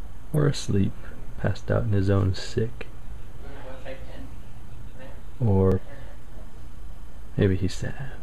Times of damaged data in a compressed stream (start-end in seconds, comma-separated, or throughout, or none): 0.33-0.38, 5.72-5.78, 7.76-7.81